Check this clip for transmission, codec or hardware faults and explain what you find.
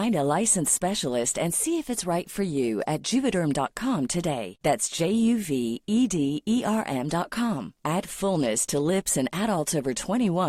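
Nothing audible in the speech points to a fault. There is no point in the recording that needs flagging.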